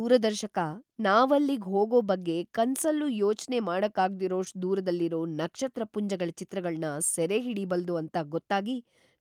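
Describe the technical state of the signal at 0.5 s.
At 0.5 s the signal is intact, with no audible technical fault at that point in the speech.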